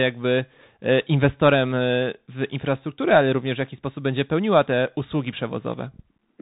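Speech, sounding boxed-in and telephone-like from start to finish, with nothing above 4 kHz, a granular hiss under the voice and scratchy, distorted sibilants. This is the Bluetooth CVSD headset codec, plainly audible: a one-bit up-or-down delta coder whose adaptive step cannot follow fast, loud high-frequency detail, which fits a 64 kbps CVSD link.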